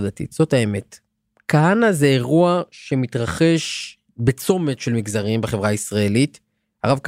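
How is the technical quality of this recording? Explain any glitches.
No audible glitches or faults.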